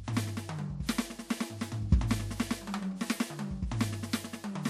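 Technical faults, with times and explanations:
0.83–0.89 s, pre-echo: a short hiss rises for about 57 ms just before a sharp attack in the music, softening its onset. The codec spread quantisation noise across its whole transform block, so noise sized for the loud hit spills into the quiet moment before it.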